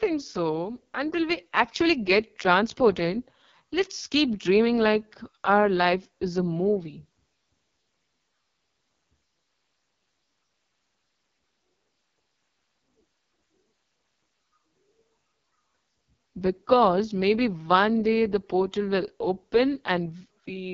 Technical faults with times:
0.00-20.73 AMR wideband (HD Voice) codec

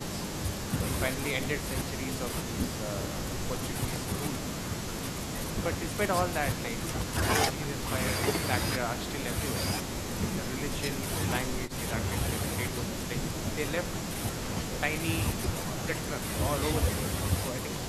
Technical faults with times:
none

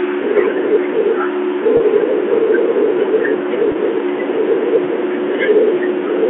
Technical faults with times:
1.36-6.25 train of clicks
1.77-1.80 packet loss with pitch repetition
3.72-3.75 packet loss with pitch repetition

